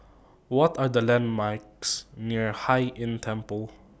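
Speech, with nothing technically wrong in it.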